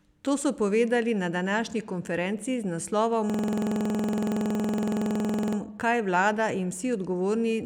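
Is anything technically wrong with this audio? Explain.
Yes. From 3.30 s to 5.57 s there is a system hang loop. The playback path stalled while the sound hardware kept replaying one 46 ms block, which fits a 2048-sample buffer. It repeats about 50 times at 21.5 Hz, producing a rapid mechanical stutter in place of the speech.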